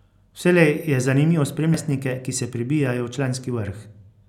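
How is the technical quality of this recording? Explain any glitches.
One glitch stands out: at 1.74 s the speech is broken by a brief glitch that lasts only an instant. That is damaged data in a compressed stream. Some bytes at that point in the encoded file were lost, zeroed or overwritten, so the decoder could not interpret the affected frame. It lost its place and had to find the next valid frame header before clean decoding resumed.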